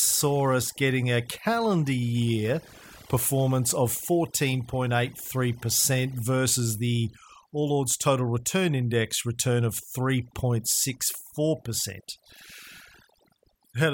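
From start to finish the speech carries overdone noise removal: a noise reduction stage set far too aggressively has pulled individual frequency bands down or out wherever they sat close to its noise estimate, taking the softer parts of the voice along with the noise. Between phrases the background falls to near silence dotted with twinkling specks. Unlike a noise gate, which mutes everything at once, this strips bands selectively.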